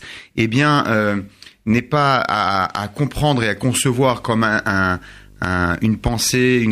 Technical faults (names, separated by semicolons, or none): video or display buzz